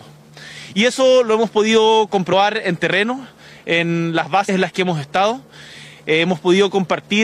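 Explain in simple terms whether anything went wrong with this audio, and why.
Compressed frames were skipped: the decoder dropped whole blocks of the file, each 24 ms long, as missing or damaged. At 0.95 s roughly one frame is lost, at 2.32 s about two, and at 4.48 s about three. Each time the audio jumps ahead by about 20, 50 and 70 ms.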